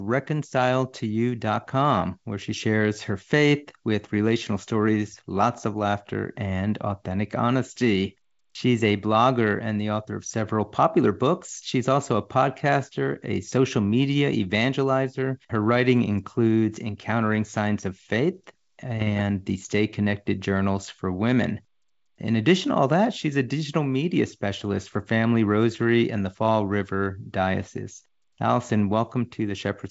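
From 18.98 to 19.21 s the speech breaks into pops and a rough, gritty burst with brief jumps in level. These are bit errors on an ADPCM link. Around half a percent of bits flipped on the G.722 stream, and each error knocked the decoder's step size and predictor off track, so the damage rang on for milliseconds.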